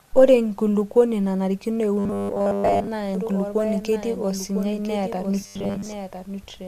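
Speech clip with two faults. From 1.99 to 2.89 s and again from 5.41 to 5.87 s there is robotic sound from repeated short buffers: a rigid 100 Hz buzz, most likely because audio arrived too slowly and the software kept replaying the last 10 ms, skipping most of the real material in those stretches. From 3.15 s to the end there is a doubled audio track, a full-band copy roughly 1 s behind and about 10 dB quieter. It starts abruptly with no room colour, which points to a slower second capture path or an edit holding two out-of-step copies, likely one or the other.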